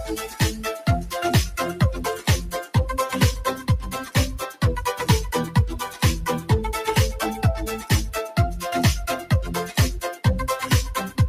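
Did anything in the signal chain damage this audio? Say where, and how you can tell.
Yes. Call processing is at fault: a noise suppressor applied to music or sounds runs throughout, swinging the level by around 10 dB. Held and decaying parts sink while onsets pass intact, unlike a compressor, whose gain reduction tracks loudness rather than steadiness.

The sound cut by the noise suppressor falls between 0.0 and 0.88 s, with about half a second pulled down by as much as about 9 dB. It is a spectral gain cut, not a dropout: the sound thins and recedes rather than falling silent.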